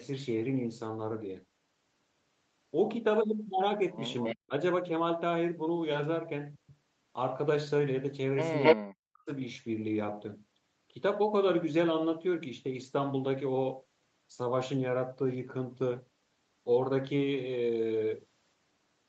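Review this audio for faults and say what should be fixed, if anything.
Echo leak at 4.17–4.35 s and 8.63–8.76 s: a copy of the speech returns about 270 ms late. The first is nearly as loud as the speech; the second is louder. This is likely the far end's echo canceller letting loudspeaker sound through. On a spectrogram it shows as a repeated, offset harmonic pattern. Better far-end echo cancellation or a headset there would prevent it.

Speech suppressed in double talk at 4.33–4.52 s and 8.75–9.29 s: the speech drops deeply, around 40 dB, for roughly 150 ms and then half a second. The likely cause is the canceller ducking both talkers. The waveform shows sudden near-silent gaps. Tuning the canceller's double-talk detection would keep the talker's speech audible.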